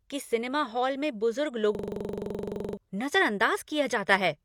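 From 1.75 to 2.77 s a system hang loop replays one 42.7 ms slice 24 times, which fits a 2048-sample buffer, as a 23.4 Hz machine-gun rattle. Unlike a dropout or jittery stutter, every repeat is identical, and about a second of speech is lost.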